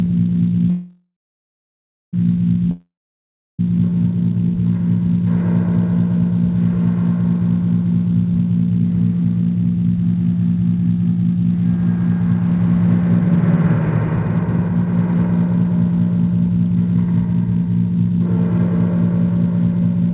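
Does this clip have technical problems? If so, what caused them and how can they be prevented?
Yes. From 0.70 to 2.15 s there is a call audio freeze: the sound trails into a fading buzz, then about a second of silence, and resumes intact. This is likely from delayed packets draining the jitter buffer. A deeper jitter buffer and a more stable network route would prevent it.

From 2.71 to 3.61 s there is a long network dropout: a brief fading tail, then silence, and the sound returns with about 0.88 s lost. Packets likely never arrived. Prevent it with a more reliable connection or with redundancy such as forward error correction.

From 9.22 to 18.70 s, and again from 19.10 to 20.12 s, there is a jitter buffer speed-up. The sound runs hurried, about 7 to 8% faster at unchanged pitch, as the receiver trims pitch-period slices. It removes roughly 0.7 s and 0.1 s in total. Smoother packet delivery would prevent it, because the buffer would not overfill after bursts. 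Throughout, the band ends at 4 kHz, consistent with a narrowband 64 kbps G.711 call path.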